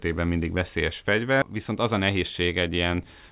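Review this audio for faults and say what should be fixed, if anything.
Right after "mindig veszélyes", around 1.42 to 1.44 s, there's a skip ahead: roughly 0.7 s of audio got dropped while later packets were already queued, so playback jumps straight to the newer material with no gap filled in. Keep the jitter buffer from overflowing by sizing it for the network's actual burstiness.

From 1.54 to 2.69 s you get a jitter buffer speed-up. The buffer was over its target, so the receiver kept trimming short pitch-period chunks, about a tenth of a second in total, and the sound runs at 106% speed with pitch unchanged, a bit hurried. Smooth out delivery bursts, or let the buffer drain more gently, so it doesn't have to catch up this quickly.

The call path itself tops out at 4 kHz, consistent with G.711 A-law.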